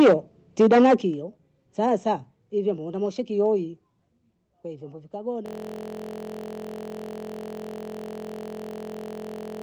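Speech opens with microphone overload from 0 to 0.14 s and again from 0.6 to 0.94 s. The peaks are squared off against the converter ceiling, about 12 dB and then about 9 dB over, giving the loudest syllables a harsh crackle. Excessive microphone input gain is the likely cause. At 1.02 s the microphone volume steps down by about 8 dB in one jump, and voice and background fall together. This is most likely the call software cutting device gain after those distorted peaks. From 5.46 s to the end, a system hang loop replays one 23.22 ms slice continuously, producing a steady buzz at 43.1 Hz. That loop length fits a 1024-sample buffer being cycled while the host stalled. The Opus call path band-limits the audio to 8 kHz.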